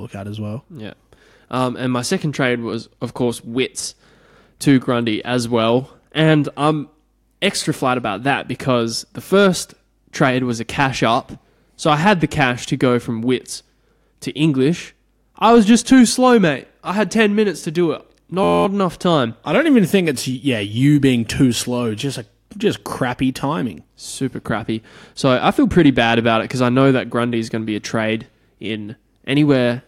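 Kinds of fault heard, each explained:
System hang loop: the system stalled after "minutes to do it", replaying one 11.6 ms slice about 19 times, a buzz near 86 Hz, suggesting a 512-sample buffer.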